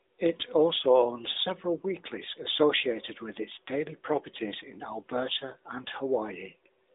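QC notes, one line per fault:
The speech sits in a narrowband telephone channel, roughly 300 Hz to 3.7 kHz with nothing above 3.8 kHz, carried by the AMR narrowband mobile codec at a level of coding consistent with its 12.2 kbps mode, and no technical fault can be heard.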